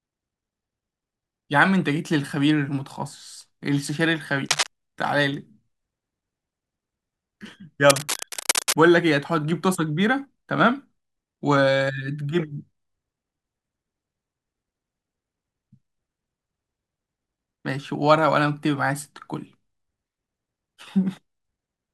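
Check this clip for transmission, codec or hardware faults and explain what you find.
There is a hardware fault. Cable scratch noise at 4.49–4.67 s and 7.90–8.73 s: rustling bursts over the speech, likely from a worn connector changing contact resistance, first as loud as the speech, then slightly quieter.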